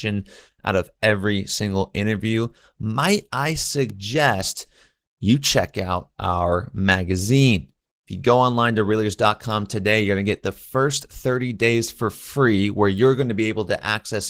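The whole clip carries Opus voice compression, and the damage is plainly audible. The coder is running in hybrid mode, with linear prediction handling the lower band and a transform layer above 8 kHz. The speech comes out hoarse and a bit robotic, which fits a rate of around 16 kbps.

At 3.90 s, right after "single interview might I", there's a bit error spike: a flipped bit makes a couple of samples jump by a power of two and return, giving one sharp broadband tick. Another one lands at 12.98 s, after "days for free where", this time a single-sample jump.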